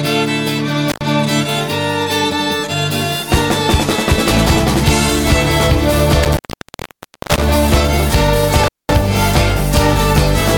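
The audio suffers from intermittent contact, cutting out at 0.90–1.01 s, 6.23–7.44 s and 8.64–8.93 s for about 90 ms, 0.93 s and 210 ms. A loose plug or cable momentarily breaks the circuit, leaving faint hiss rather than digital silence, with crackle at each edge.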